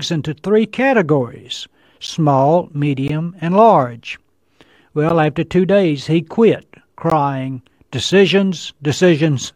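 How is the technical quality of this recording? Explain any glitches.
The recording is marred by five short dropouts from a gap between stream segments, at 2.07, 3.08, 5.09, 7.10 and 8.11 s. The timestamps of adjacent one-second segments fail to line up exactly, so the player fills each gap with silence, from about 4 to 16 ms. The result is a hard-edged hole in the speech, heard as a brief tick or stutter at segment boundaries. Nothing is lost, only delayed.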